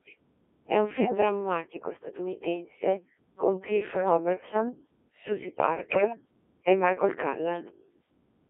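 Robotic, buzzy speech runs through the whole clip, confined to roughly 300 Hz to 3.4 kHz. This is the Codec 2 vocoder, whose heavy damage fits a rate near 1.3 kbit/s. It sends only pitch, voicing, level and a coarse envelope, then rebuilds the voice from sine waves.

At 1.00 to 1.17 s, and again at 3.96 to 4.17 s, the voice lurches in pitch and level and breaks into warbling, bleepy gibberish. These are bit errors on digital voice radio. With a few percent of bits flipped, several frames at a time decode with wrong parameters.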